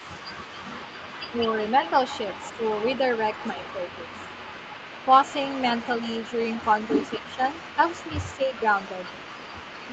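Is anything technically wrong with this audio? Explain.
Yes, there are two faults in this speech. An echo leak runs from 0.0 to 9.9 s: a faint copy of the speech trails 221 ms behind, roughly 20 dB down, likely from a loudspeaker echo the far-end canceller failed to remove. Speech suppressed in double talk occurs at 1.31–1.38, 7.18–7.41, 7.76–7.81 and 8.32–8.54 s: the speech briefly dips by a few dB, up to roughly 10 dB, likely because the canceller mistook overlapping talk for echo.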